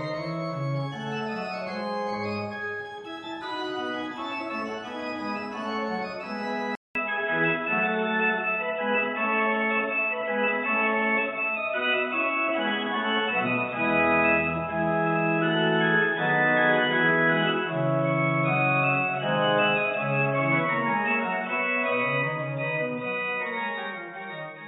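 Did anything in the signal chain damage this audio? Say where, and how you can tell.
Yes. At 6.75 s the sound drops out for about 200 ms. After that, it stays changed to the end. Nothing reaches above 3.8 kHz, so the tone turns dull and boxy. The level shifts by a few decibels, and a new background noise floor appears, sitting well below the signal. This points to the input stage. The system likely switched to a poorer device, such as another microphone or a headset call profile, with a narrower band and its own noise.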